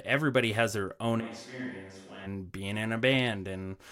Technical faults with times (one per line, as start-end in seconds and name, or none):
1.22-2.25 switch to a distant microphone